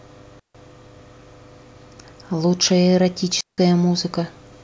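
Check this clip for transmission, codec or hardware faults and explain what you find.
The clip has two digital wireless dropouts. At 0.39 to 0.55 s and again at 3.41 to 3.58 s, the wireless link lost too much data and the receiver muted, leaving clean holes of near silence in the speech, about 150 ms and 170 ms long, with no noise burst on either side.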